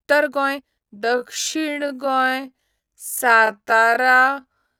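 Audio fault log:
0.96 to 4.79 s, time-stretched section: speech abruptly slows to 0.53x pace with pitch held, sounding dragged, likely from software repeating short slices to lengthen it.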